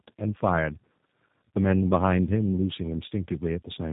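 Rough, muffled and warbly from start to end, with nothing above about 3.8 kHz. This is tandem speech coding: the speech was decoded and re-encoded at a link border, so a second low-rate coder, consistent with 8 kbit/s G.729A, reworked the first one's already degraded output.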